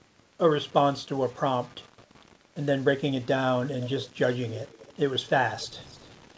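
From the start and throughout the speech, a grainy distortion rides on the signal and changes with it. This is low bit depth without dither. It is likely caused by rounding the samples to very few steps, which fits about 7-bit resolution, with no dither to break up the error. The error sits roughly 30 dB below the speech and tracks it closely. Quiet passages turn gritty and harsh. The G.722 call path's cut-off leaves nothing above 8 kHz.

From 3.83 to 4.93 s, a faint delayed copy of the speech follows the original. This is echo leak. Its delay is about 249 ms, and it sits roughly 25 dB below the speech. It likely comes from a loudspeaker on the far side, where the echo canceller let some of the pickup back into the call. It returns from 5.51 to 6.08 s, about 254 ms late and fainter still, near 30 dB down.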